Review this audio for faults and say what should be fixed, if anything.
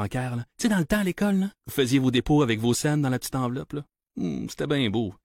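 Nothing stood out on listening, so there is nothing here that needs fixing.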